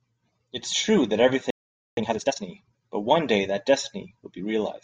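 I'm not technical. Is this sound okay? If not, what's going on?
No. The speech cuts out abruptly at 1.50 s and stays silent until 1.97 s, a gap of roughly half a second (0.47 s). This is a playback stall. The player most likely ran short of incoming audio or was briefly held up by other work on the device, so it had nothing to send to the speaker.

From 1.97 s to 2.43 s the speech runs at twice its normal speed while keeping its normal pitch, so it sounds rushed but not squeaky. This is time-compressed catch-up. To recover the half second lost in the stall, the player drops tiny slices of audio and smoothly blends the remaining pieces together.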